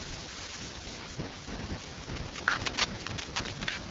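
Speech runs through the AMR wideband (HD Voice) codec at 6.6 kbit/s, its lowest rate, so the whole clip sounds rough and raspy. Unlike a narrowband phone channel cut near 3.4 kHz, the audio still reaches about 7 kHz before going silent. From 2.16 to 3.64 s, cable scratch noise adds dense, uneven bursts of scratching, roughly as loud as the speech, that are likely caused by a worn cable or connector being moved. Unlike the codec's constant rasp, it comes and goes with the handling.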